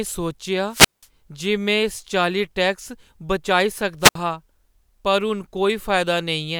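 At 0.69 s the speech hits a wireless microphone squelch dropout lasting until 1.07 s. The radio signal fades, hiss rises briefly, then the receiver's squelch mutes the output for about 183 ms. A hole of near silence follows before the speech returns. A second, shorter dropout runs from 4.00 s to 4.15 s. Here the squelch gap is only about 65 ms, a quick blink of silence between the static and the restored signal.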